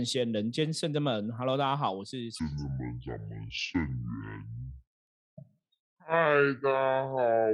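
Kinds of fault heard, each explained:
Section at the wrong speed: from about 2.40 s to the end at 7.54 s the speech abruptly turns deep and dragging, slowed to 0.58 times its proper rate, with the pitch dropping by close to ten semitones, so the voice sounds heavy and stretched in both tempo and tone. Because speed and pitch fall together at a single point, this section was likely played back against the wrong clock.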